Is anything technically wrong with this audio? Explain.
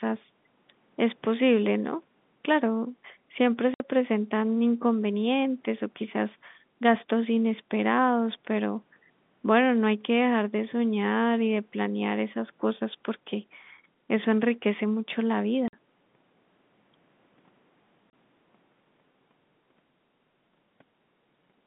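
Yes. The speech drops out abruptly three times, at 3.74 to 3.80 s (60 ms), 15.68 to 15.73 s (50 ms) and 18.10 to 18.13 s (30 ms), each gap with hard edges. This is packet loss filled with silence: packets never arrived, and the receiver played nothing in their place, cutting the waveform off mid-cycle. The gap lengths, all multiples of 10 ms, fit 10 ms packets. The line itself carries the narrow telephone band of G.711 coding.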